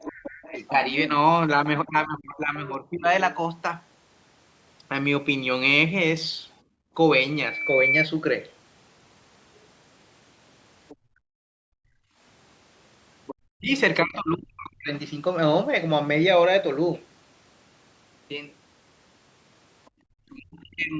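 A speech recording about 21 seconds long, band-limited to 8 kHz by ordinary call microphone processing, carries several echo-control faults. A second, fainter voice, the other side's voice leaking through, runs under the talker from 0.0 to 3.35 s and from 10.89 to 13.35 s at roughly 15 dB below the speech. Brief scraps appear at 7.61 to 7.65 s and 19.85 to 19.9 s, far lower, around 35 to 40 dB down. The likely cause is a loudspeaker on the talker's device whose output the echo canceller only partly subtracted from the microphone. Over three stretches, 0.51 to 3.08 s, 13.58 to 14.91 s and 20.05 to 20.99 s, the talker's own speech dips and breaks up for about a second in total each time. The dips reach roughly 20 dB in the first stretch and roughly 40 dB in the later two. This is likely speech suppressed in double talk: with both sides active, the canceller probably could not separate the near voice from the echo and turned both down. 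The room background also drops out when the canceller clamps the microphone during loudspeaker playback. This background gated by the echo canceller occurs from 6.62 to 6.94 s, with a drop of about 24 dB, and again from 10.96 to 12.19 s, with a drop of about 36 dB. From 7.29 to 8.07 s a loudspeaker feedback squeal appears as a single tone at 2.3 kHz. It swells over about half a second to about 5 dB above the signal. This happens because the microphone re-captures its own loudspeaker and the loop gain at that frequency exceeds one.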